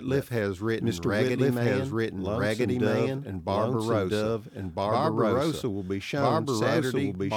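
A doubled audio track runs through the whole clip: every stretch of speech is heard a second time about one and a half seconds later, at roughly the same loudness as the first. The repeat is full-band and dry, with no decay or room colour, so it sounds like a clean second copy overlapping the original. The likely cause is the same audio being mixed in twice, once through a slower path that lags behind.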